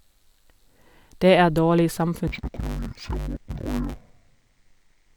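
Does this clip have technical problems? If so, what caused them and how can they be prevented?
Yes. From 2.28 s to the end, the speech turns dull and robotic with a 100 Hz buzz: interleaved audio read as planar. Each 10 ms block's alternating left-right samples are split into halves, so no clear octave drop. Prevent it by matching the reader's channel layout to the stream's interleaved format.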